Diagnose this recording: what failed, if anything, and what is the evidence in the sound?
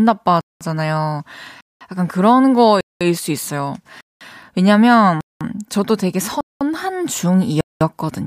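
The fault is a gap between chunks at the playback or streaming stage. Hard-edged silences of 200 ms fall in the speech at 0.41, 1.61, 2.81, 4.01, 5.21, 6.41 and 7.61 s, exactly 1.2 s apart. That is one-second chunks of audio, each followed by a pause before the next begins. Unlike packet-loss dropouts, nothing is missing: speech resumes where it stopped rather than skipping ahead, and the strict regularity rules out random network jitter.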